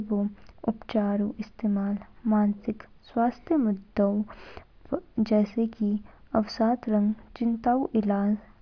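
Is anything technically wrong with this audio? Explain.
No, nothing is technically wrong with this audio.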